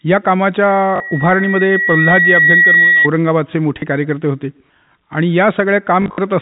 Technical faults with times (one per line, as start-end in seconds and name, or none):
0.68-3.08 loudspeaker feedback squeal
0.96-1.00 packet loss with last packet repeated
3.80-3.82 packet loss with last packet repeated
6.02-6.18 packet loss with last packet repeated